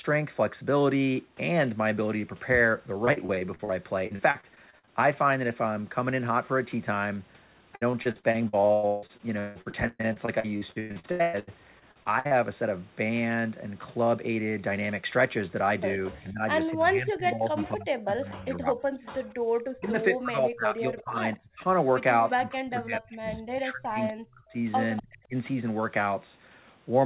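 Repeated packet loss (robotic sound) chops this speech recording in three stretches: 2.94 to 3.71 s, 4.07 to 4.89 s, and 7.75 to 12.33 s. In each stretch, short holes arrive one after another. The decoder fills each hole by stretching the last piece of sound, which gives a choppy, metallic texture with bits missing. Roughly 30%, 27% and 39% of those spans are patched. The longest holes are 45 ms, 44 ms and 161 ms. Speech suppressed in double talk follows at 16.10 to 18.89 s, 19.76 to 21.65 s, and 22.35 to 25.35 s. The talker's level sinks in pieces, by around 25, 30 and as much as 40 dB at the deepest, for a couple of seconds in each stretch. The likely cause is an echo canceller facing both sides talking at once: it cannot tell the near talker from the loudspeaker return, so it turns everything down. An echo leak surfaces at 17.59 to 17.69 s, 19.59 to 19.63 s, 21.02 to 21.37 s and 24.97 to 25.02 s. 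It is a faint delayed copy of the voice trailing by 243 ms and sitting some 20 to 35 dB below the speech. The likely source is loudspeaker pickup that the far end's canceller failed to remove fully and then sent back. Background gated by the echo canceller appears at 19.23 to 19.48 s. While the loudspeaker plays, the room tone drops by about 40 dB for about a quarter of a second, then returns once the canceller releases the microphone. All of this sits within a telephone band that stops at 4 kHz, consistent with 64 kbps G.711 mu-law coding.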